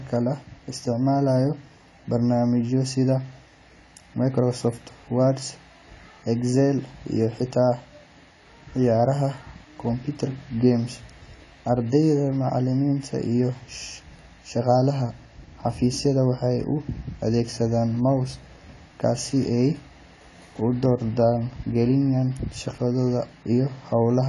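Throughout, the speech likely passed through AAC compression at a rate fitting 32 kbps; nothing survives above 11.4 kHz, so it sounds dull and smeared.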